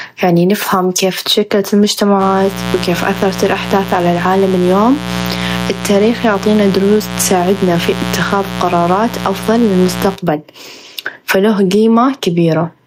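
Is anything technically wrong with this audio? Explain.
Yes, there are two faults. Gain pumping runs through the whole clip: the gain ducks by about 15 dB under louder speech, likely from excessive gain pulled down by a fast limiter. Mains buzz is present from 2.18 s to 10.18 s, a raspy 60 Hz buzz with harmonics into the kilohertz range, sitting roughly 10 dB below the speech and caused by sharp switching spikes entering twice per mains cycle.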